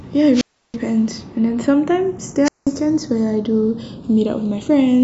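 From the start and through the whole speech clip, the channels are drifting apart: the two sides run on clocks roughly 70 ppm apart, so their offset creeps to about a third of a millisecond. In mono this gives a slow, steadily sweeping flange, unlike the fixed comb colouring of a constant delay.

At 0.33 s a wireless microphone squelch dropout begins. Hiss swells, then the receiver mutes for about 330 ms before sound returns by 0.76 s. A second dropout from 2.44 to 2.67 s mutes for about 190 ms. The rising static before each gap separates them from clean digital packet loss.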